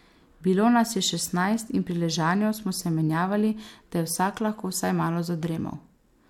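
Listening to this speech recording, nothing stood out as a technical problem.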